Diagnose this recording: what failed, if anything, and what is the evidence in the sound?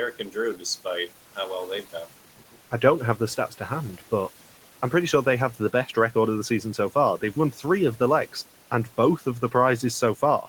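Speech cut by the noise suppressor, at 5.54 to 5.96 s (between "pretty sure they have" and "record of the season") and at 7.52 to 7.64 s (just before "of the legs and"). This is a call-processing fault. In each stretch, around a tenth of a second of speech dips by about 9 dB and sounds swallowed. The suppressor misjudged soft speech energy as noise and pulled it down together with the room noise, which sits about 21 dB below the speech.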